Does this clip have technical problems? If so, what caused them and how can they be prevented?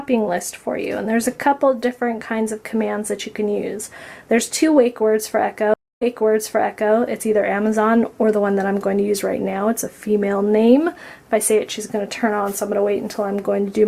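Yes. A stream reconnect occurs between 5.74 and 6.94 s. The connection dropped, leaving a gap of silence of about 275 ms while the player re-established the link and started a fresh decoder partway through the stream. When the audio comes back it jumps about 0.93 s earlier, repeating material that was already heard, because the server resent a recent burst. The new decoder starts without prior state, so the return after the gap is not seamless. To prevent this, use a steadier network path and a player that resumes from the exact byte or segment offset instead of accepting a resent burst.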